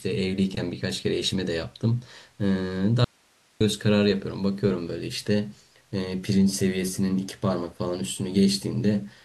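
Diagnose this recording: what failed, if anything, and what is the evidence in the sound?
The wanted signal was cut off ahead of a stage that stayed live, most likely an intermittent analogue connection feeding a still-running input, producing an audio dropout to a faint residue. The speech vanishes abruptly at 3.04 s and returns just as suddenly at 3.61 s, a gap of about 0.56 s. What fills the gap is hiss, roughly 40 dB below the speech level. Because the loss has hard edges on both sides and the noise floor continues underneath, it reads as a broken path, not a pause or a fade.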